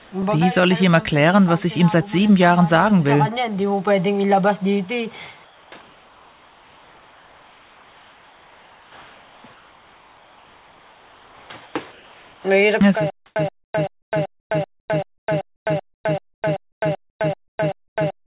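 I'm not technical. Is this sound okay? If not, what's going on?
No. There are two problems. The first is comfort noise in place of the background, at 0 to 0.12 s, from 5.44 to 12.44 s, and in short bursts at 13.26, 13.64, 15.18 and 16.72 s. The real surroundings turn into a plain, featureless hiss. The likely cause is the sending side pausing transmission when it detected no activity, with the receiving end filling the pause with made-up noise.

The second is a stutter with silent gaps, from 13.10 s to the end. A fragment about 0.13 s long repeats every 0.38 s, with about 0.26 s of dead silence between repeats. Whatever should have played there is lost, likely because playback stalled and kept replaying its last piece.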